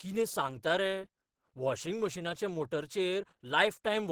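From the first moment to the last, the speech has a hoarse, muffled grain to it, and the upper range sounds rough and noisy rather than clean. That's most likely Opus compression at a low rate, with the encoder in its hybrid mode: it codes the lower band as speech and fills the top with a coarser, energy-matched layer. The full bandwidth is still there, but you can plainly hear the damage.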